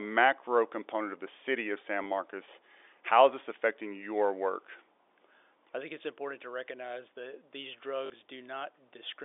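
At 2.04 to 2.06 s and again at 8.06 to 8.10 s there's packet loss with the last packet repeated. The receiver replays stale audio that doesn't line up with the pitch, so the first comes across as a small blip and the second as a short robotic stutter, longer at 8.06 s, which fits two 20 ms packets.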